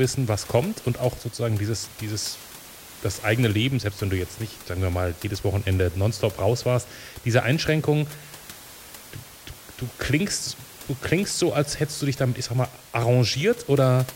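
No technical faults are audible.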